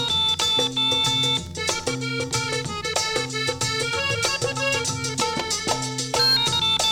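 Nothing audible goes wrong anywhere in the recording, with no technical faults to report.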